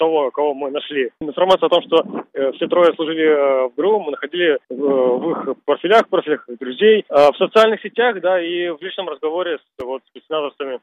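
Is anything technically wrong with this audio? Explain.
Yes, there's one glitch near the end: a brief case of chunks out of order at about 9.8 s. A short piece of audio, around 5.33 ms long, arrived one chunk late and got played after the piece that should have followed it. Nothing's actually missing, but swapping the two creates three hard joins, so you hear a quick jumble where the sound briefly scrambles.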